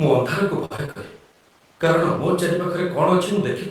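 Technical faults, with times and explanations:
0.65–0.97 s, repeated packet loss (robotic sound): right after "ମୁଁ ଅନ୍ଧାରକୁ" the speech turns choppy and robotic, with pieces missing. Packets dropped in quick succession, and each hole, the longest about 49 ms, was patched by extending the last sound, leaving over a third of this stretch synthetic.
1.04–2.37 s, call bitrate drop: the speech becomes rough, watery and muffled, its top end dulled for about 1.2 s before clearing. This points to the encoder being pushed from around 40 kbps down to 17 kbps after the bandwidth estimate fell, so it coded coarsely and trimmed the high frequencies.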